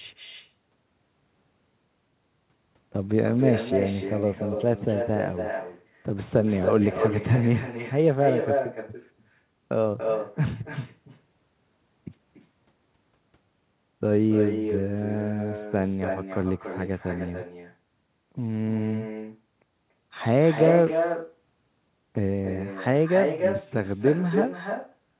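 Echo with no canceller, throughout: the far end's loudspeaker leaks into its microphone, so the talker's voice returns roughly 300 ms later as a thinner copy about 6 dB down.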